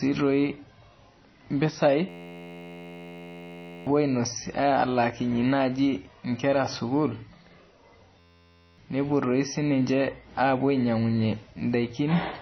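Throughout the speech, the top end stops dead at 6.1 kHz and the sound is plainly watery and swirly, with sibilants chirping and consonant onsets smeared. This is likely MP3 compression, and the damage fits a very low bitrate of around 24 kbps.

From 2.09 to 3.87 s and again from 8.20 to 8.78 s, a system hang loop replaces the speech with a steady 86.1 Hz buzz. An 11.61 ms fragment repeats while the output keeps cycling one buffer, consistent with a 512-sample buffer. Roughly two seconds, then half a second, of speech is lost.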